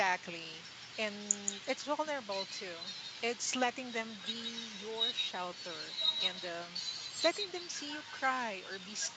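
A doubled audio track runs through the whole of this speech recording: a second, full-band copy trails the original by about a fifth of a second, roughly 5 dB quieter and with no decay or room colour. It is likely the same sound captured again over a slower path, all within a call-codec band that stops at 8 kHz.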